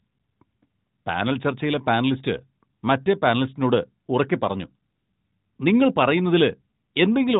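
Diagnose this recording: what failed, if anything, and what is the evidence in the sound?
Nothing in the chain has failed: the speech arrives intact over an AMR narrowband mobile codec path, which shows as a band ending near 3.8 kHz and a light coding texture that fits the 12.2 kbps mode.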